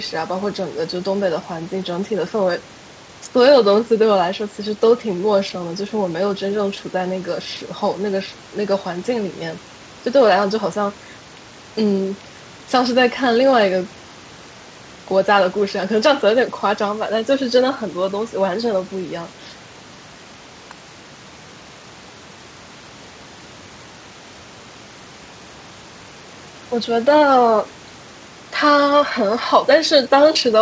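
No technical faults are audible.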